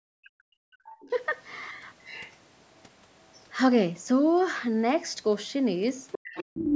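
From the very start to 0.79 s, the talker's speech sinks sharply, dropping by roughly 40 dB at its deepest for most of that opening stretch. This is speech suppressed in double talk. Both ends were likely speaking at once, and the echo canceller, unable to tell the talker's voice from the loudspeaker echo, turned everything down together.

Right after, a second, fainter voice surfaces behind the talker in short scraps at 0.84 to 1.10 s, 1.47 to 1.60 s, 1.99 to 2.36 s, 2.75 to 2.82 s and 3.23 to 3.44 s. These range from barely audible, about 40 dB under the speech, to a clearer trace about 20 dB down. The last stretch, 6.12 to 6.75 s, is far louder, only about 5 dB below the talker. This is the other side's voice leaking through. The far end, played on the talker's loudspeaker, was probably not fully removed from the microphone signal by the echo canceller. The call's microphone processing is audible too, with nothing above 8 kHz.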